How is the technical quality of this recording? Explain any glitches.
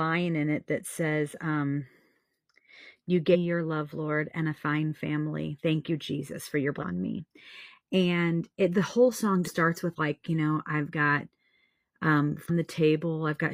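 The speech has four short glitches, all from damaged data in a compressed stream, at 3.30–3.36 s, 6.78–6.84 s, 9.43–9.49 s and 12.45–12.50 s. Each lasts about 60 ms and sounds like a brief chirp or squawk. Corrupted bytes in the encoded stream cause the decoder to misread frames at those points. It then loses sync and hunts for the next valid frame header.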